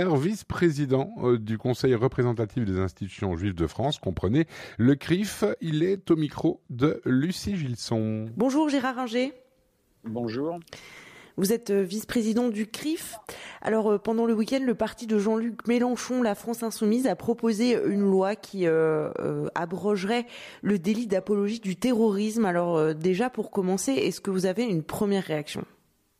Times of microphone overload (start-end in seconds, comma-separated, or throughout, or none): none